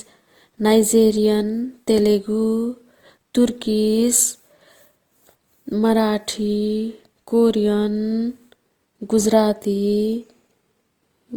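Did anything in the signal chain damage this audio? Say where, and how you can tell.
Yes, at the codec stage: the speech carries Opus compression from start to finish. It sounds grainy and rough, with noise filling where detail should be, yet content reaches about 20.2 kHz. That points to Opus's music mode filling starved bands, likely at around 24 kbps.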